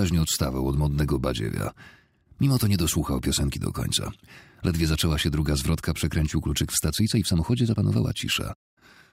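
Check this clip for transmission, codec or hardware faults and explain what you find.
One fault is present, a time-stretched section near the end.

Time-stretched section, from 6.91 s to 9.13 s: the pace jumps abruptly to about 1.35 times the earlier rate while the pitch stays where it was. This is likely software squeezing that stretch of audio to fit a shorter length, preserving pitch by dropping short slices and splicing the remainder together. The result sounds rushed.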